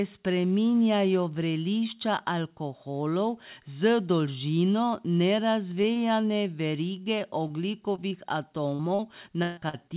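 Right around 5.82 to 5.86 s and again 5.94 to 5.98 s there's short concealed packet loss: two tiny holes of roughly 20 ms each, where the receiver stretched the preceding sound to cover the missing bit, so you get a quick smear or wobble.

From 7.04 to 8.13 s come scattered short gaps, about four small dropouts, none much over 20 ms. Each gets patched by carrying the last sound forward, so the audio stays clear but hiccups a few times.

Then 8.75 to 9.75 s turns into repeated packet loss with that robotic sound. Four gaps, the longest 143 ms, mean about 26% of that second is synthesized fill. The patches pile up, giving a choppy texture with chunks missing. All of this sits on a call path with nothing above 4 kHz, which fits a narrowband telephone codec.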